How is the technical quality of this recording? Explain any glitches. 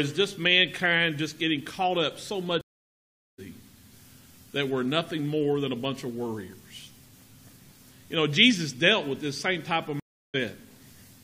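The recording is marred by two stream reconnect dropouts. From 2.61 to 3.40 s the sound cuts to about 0.77 s of silence, and from 10.00 to 10.36 s it cuts again for 0.34 s. Each time the connection broke, the player stalled, then reconnected with a fresh decoder further along the live stream, so the sound resumes roughly 0.7 s and 0.4 s later than where it stopped, with material skipped. On a waveform both appear as flat gaps with an abrupt or softly ramped restart; a spectrogram shows blank vertical bands and a discontinuous join.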